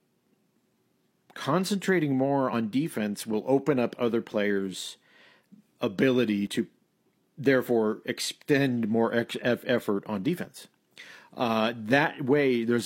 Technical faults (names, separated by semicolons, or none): overlap between stream segments